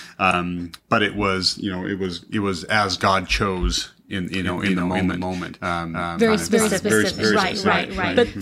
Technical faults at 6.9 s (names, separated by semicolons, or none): doubled audio track